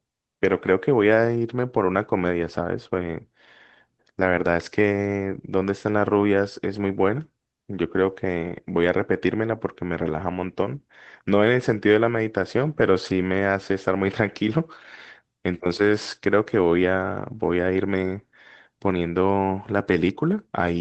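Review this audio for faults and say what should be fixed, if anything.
Nothing here needs fixing; the speech comes across fine, with the call path working as it should.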